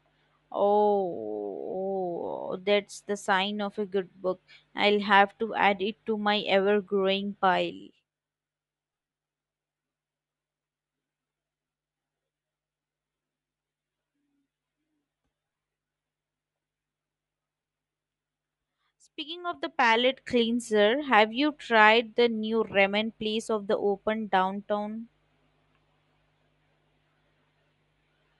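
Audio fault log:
throughout, Bluetooth LC3 compression: the speech carries a breathy, grainy edge in its upper range, where much of the spectrum has been discarded and refilled with noise; that likely comes from the LE Audio transform codec at a rate near 48 kbps with 10 ms frames, applied across the whole clip.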